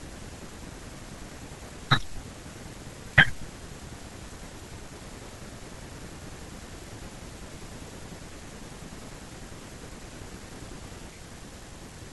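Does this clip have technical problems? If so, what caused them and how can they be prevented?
No, nothing technical goes wrong anywhere in this speech recording, so there's nothing here that needs preventing.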